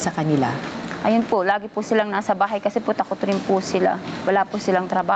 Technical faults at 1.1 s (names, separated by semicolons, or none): gain pumping